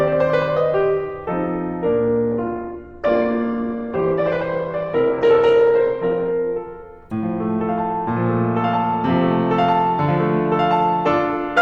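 From 2.32 s to 6.32 s the music abruptly loses everything above 8.2 kHz and turns smeared with codec artefacts, with no gap at either edge. This is an adaptive stream at a lower bitrate. A slowed connection forced a cheaper version, which fits Opus dropping to around 12 kbit/s.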